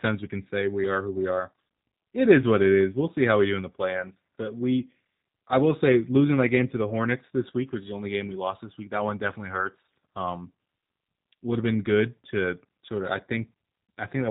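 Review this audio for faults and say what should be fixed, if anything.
The whole clip, start to finish, carries G.729 codec damage, and it's plainly audible. The speech comes through with that slightly rough, synthetic edge you get when a codec rebuilds the sound from a vocal tract filter, a pitch predictor and a handful of pulses per 10 ms frame instead of sending the waveform itself. Nothing gets through above about 3.8 kHz, which fits an 8 kbit/s telephony codec. To avoid it, record or route the call through a wideband codec, or capture locally, rather than going through a G.729 leg.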